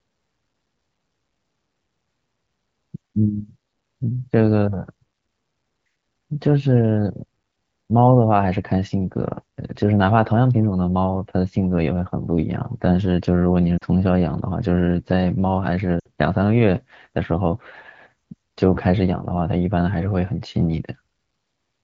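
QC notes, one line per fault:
13.77–13.84 s and 16.00–16.07 s, lost AMR speech frames: two short gaps of about 40 ms and 60 ms, consistent with two and three missing 20 ms frames. Each time, the decoder fills the hole by repeating the last good pitch and vocal tract settings while lowering the gain. That makes the speech briefly smear and sag toward silence, decaying quickly as wideband concealment does, before returning weak or rough for a moment. The surrounding AMR-WB audio at 12.65 kbit/s stays clear.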